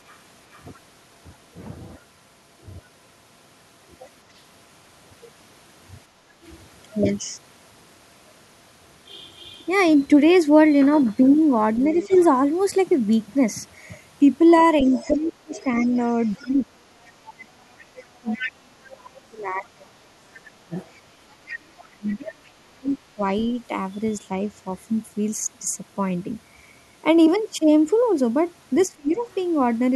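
Between 0.08 and 0.62 s a faint second voice sits under the talker's speech, far quieter, very roughly 35 dB down. This is the other side's voice leaking through, likely because the echo canceller left a residue of the loudspeaker signal in the microphone feed. On a spectrogram it shows as weak harmonic traces that don't line up with the talker's own formants. The same leak returns much more strongly from 11.96 to 22.16 s, at around 20 dB below the speech, and briefly again from 28.83 to 29.34 s at roughly 30 dB down.

At 6.11 to 6.37 s the background is gated by the echo canceller. The room tone dips by about 6 dB for a fraction of a second while the far end plays, then comes back. In the waveform the noise floor visibly narrows for that moment. On a spectrogram it appears as a short, paler band across all frequencies.

From 11.92 to 23.2 s the talker's speech is suppressed in double talk. 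With both sides talking, the canceller likely couldn't tell its own talker from the echo and pulled everything down. The voice dips and drops out in pieces adding up to several seconds, at worst about 30 dB down. These show as gaps and clipped-looking envelopes in the waveform, and as missing upper harmonics on the spectrogram. A short repeat at 28.87 to 29.23 s cuts deeper, about 35 dB.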